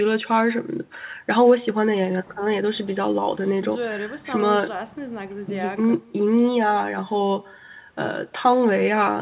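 From start to finish, the speech carries an echo with no canceller. The far end's loudspeaker feeds its microphone, and nothing removes that return. Each phrase is shadowed roughly 150 ms later by a faint, thin copy, about 28 dB down, through a band with nothing above 4 kHz.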